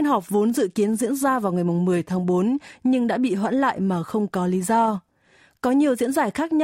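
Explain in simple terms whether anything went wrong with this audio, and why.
Nothing went wrong here: the speech comes through steadily with no dropouts, glitches or other faults to point to anywhere in the recording.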